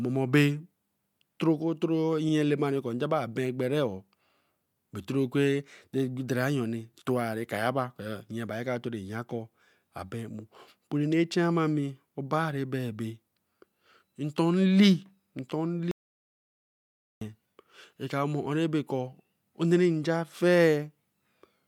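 Speech with two faults. At 2.29 to 2.32 s a compressed frame was sent twice, a repeated frame, so a 32 ms slice plays again as a brief stutter. From 15.91 to 17.21 s the input was likely lost while recording continued, an audio dropout to silence, so 1.3 s of speech falls to total silence with no room tone.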